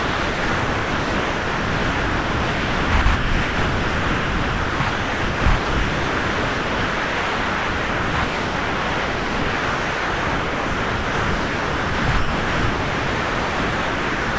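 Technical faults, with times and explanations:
0.00–2.92, 3.02–3.06, 3.16–4.80, 4.90–5.46, 5.56–8.14, 8.24–12.08 and 12.18–14.39 s, sound dropped by the voice detector: almost the entire clip is replaced by smooth, even comfort noise, with only about 0.1 s slivers of real sound between the stretches. The cause is likely a sender-side detector treating these non-speech sounds as background and muting them. On a spectrogram the runs appear as flat, featureless bands cut by thin vertical slivers of detail. On the waveform they form a steady low envelope with brief bursts. Nothing appears above 8 kHz, which fits a wideband call codec.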